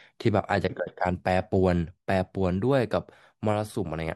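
Speech recording, no technical faults detected.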